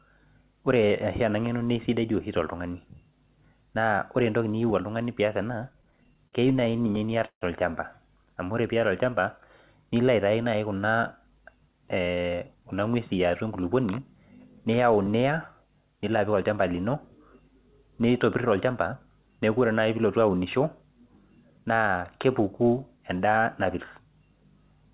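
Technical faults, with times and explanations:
5.70–7.43 s, repeated stalls (stutter): late packets left the jitter buffer empty 25 times. The receiver extended the last sound, 433 ms in total and up to 154 ms at once, so the audio drags and stutters while nothing is lost. On the waveform, short stretches repeat and fade in the longer gaps. The spectrogram shows smeared, frozen harmonics below the 4 kHz band edge.
8.24–9.22 s, jitter buffer slow-down: repeated pitch periods added 83 ms, so playback runs at 92% speed with the pitch unchanged. The spectrogram shows drawn-out harmonic stretches, and the waveform shows near-identical cycles in a row.
11.24–12.62 s and 22.97–24.00 s, jitter buffer speed-up: to cut excess delay, short pitch-period pieces were dropped, roughly 150 ms and about 100 ms. Playback runs at 111% and 108% speed with the pitch unchanged, so the audio sounds hurried, and the waveform shows compressed segments.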